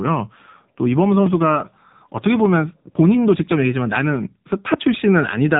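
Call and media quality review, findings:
Speech buzzy, thin and synthetic throughout, no content above about 3.8 kHz. Probable component: AMR narrowband mobile codec (AMR-NB), heavy damage, which fits the 6.7 kbps mode. Mechanism: 8 kHz sampling caps the band, and few excitation pulses per 5 ms subframe of each 20 ms frame leave a buzzy, artificial timbre.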